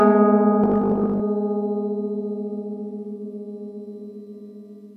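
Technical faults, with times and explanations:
Throughout: HE-AAC compression. Plainly audible damage across the whole music clip, with nothing present above 14.9 kHz. The treble has a bright but synthetic, metallic sheen. The likely cause is spectral band replication: only the lower spectrum is coded, and the upper bands are copied up from below and shaped by a coarse envelope. Their harmonics don't align with the real ones at the crossover. The degree of damage fits a low bitrate of around 24 kbps.
0.64–1.22 s: robotic sound from repeated short buffers. For just over half a second the music takes on a rigid, metallic buzz pitched at 50 Hz, though its broad contour still comes through. This likely comes from the playback path running short of fresh audio and refilling the gap by looping the most recent 20 ms segment, which imposes the fixed 50 Hz pitch. Roughly half the material in this stretch is repeats, and the real audio in their place is lost.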